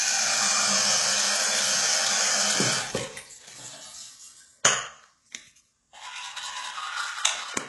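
From start to finish the treble is gritty and metallic, with nothing above 11.5 kHz and heavy coding damage, likely from HE-AAC compression at a very low bitrate, around 12 kbps. The upper band is rebuilt from copied lower bands, so its harmonics don't align with the real content.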